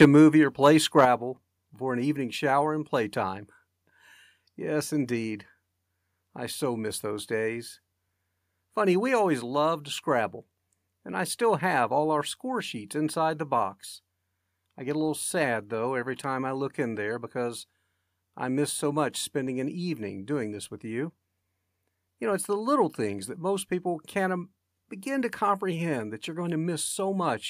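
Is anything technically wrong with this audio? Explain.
Yes. The speech has two kinds of level fault, both in the first second or so.

Microphone overload occurs from 0.00 to 0.05 s, driven about 4 dB past full scale with roughly a tenth of samples flattened, and again from 0.99 to 1.01 s, about 2 dB over with only a few percent clipped. The likely cause is input gain set high enough that peaks hit the converter's ceiling. The cut-off tops add a harsh crackle on the loudest moments, unlike compression smearing, which dulls the sound.

The microphone volume is stepped down at 0.05 s by about 4 dB, then at 1.05 s by about 6 dB. Each step likely comes from call software lowering the input gain after detecting clipping. Voice and background drop together in one abrupt step right after each distorted burst. That is what separates it from a gradual fade or a noise gate.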